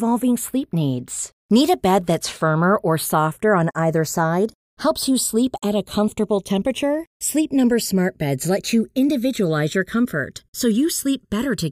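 A slow flanging sweep runs through the whole speech clip, its comb notches gliding gradually across the spectrum when heard in mono. These are the channels drifting apart: the two sides run on clocks about 70 ppm apart, so their offset creeps toward roughly 0.7 milliseconds.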